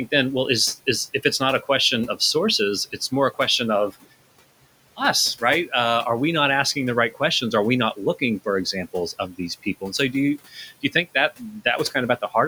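From the start, noise suppressor artifacts: the room noise, sitting about 20 dB under the speech, gets pulled down by about 17 dB between phrases, then swells back under the voice. At 9.13 to 9.4 s, right after "not looking for examples", and again at 10.51 to 10.95 s, after "so do you do", there's speech cut by the noise suppressor. It mistakes soft speech for noise and dips it by up to about 9 and 11 dB, so roughly 100 ms of the first stretch and 150 ms of the second sound swallowed.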